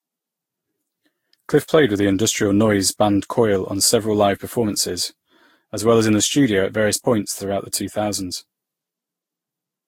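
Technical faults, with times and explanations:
Throughout, generation loss: the speech sounds swirly, hollow and smeared, with blurred consonant attacks and nothing above 16.7 kHz. That is more damage than one encode at around 60 kbit/s would leave, which points to the audio likely having been encoded about seven times with a lossy codec consistent with Vorbis. Each pass re-quantises on a shifted frame grid, so noise and spectral holes accumulate instead of staying fixed as in a single low-bitrate encode.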